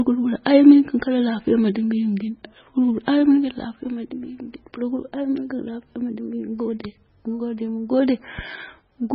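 The whole speech clip sounds watery and swirly, likely from heavy MP3 compression near 16 kbps; the spectrogram stops flat at a fixed treble cutoff, with flickering holes below.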